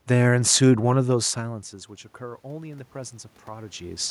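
From 1.06 to 4.06 s, automatic gain rising: after the input drops by about 20 dB, gain climbs about 8 dB, swelling speech and room noise together, visible as a slowly widening waveform.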